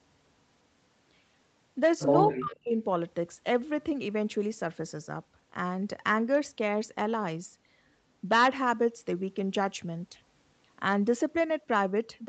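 From 2.31 to 2.76 s, the echo canceller likely failed to tell the near talker apart from loudspeaker echo while both sides spoke at once, and turned everything down. This is speech suppressed in double talk. The voice sinks sharply, by roughly 40 dB at its deepest, for a total of around four tenths of a second. The call's normal band limit, with nothing above 8 kHz, is present throughout.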